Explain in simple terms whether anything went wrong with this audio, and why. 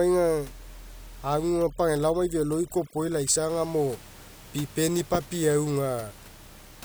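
Between about 1.49 and 3.49 seconds, a noise reduction tool was set far too strong, a fault known as overdone noise removal. It treats any frequency that looks like the background hiss as noise and shuts it down, so the quieter parts of the speech get cut away too. In that stretch the faint room noise drops and breaks up into small twinkling specks.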